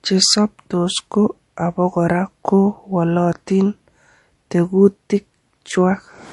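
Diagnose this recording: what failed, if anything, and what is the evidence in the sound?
The codec stage is the likely culprit: MP3 compression damage is plainly audible across the whole speech clip. Nothing reaches above 11.2 kHz, so on a spectrogram the energy stops at a flat ceiling there. Below it, weak frequency lines flicker on and off between frames, leaving a speckled, holey texture that sounds watery and swirly, with metallic chirps on s sounds. That fits a starved encoder at about 48 kbps.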